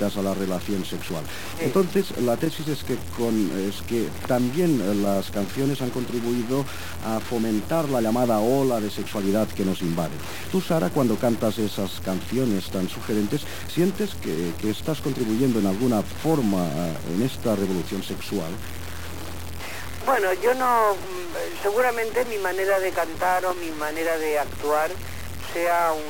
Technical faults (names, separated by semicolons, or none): low bit depth without dither